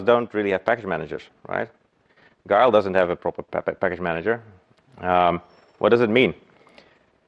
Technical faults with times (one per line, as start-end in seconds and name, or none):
none